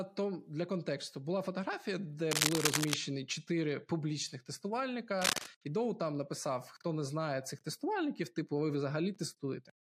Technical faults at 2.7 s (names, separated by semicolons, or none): cable scratch noise